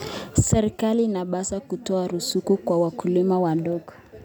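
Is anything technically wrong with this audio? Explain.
No, there are no technical faults in this recording.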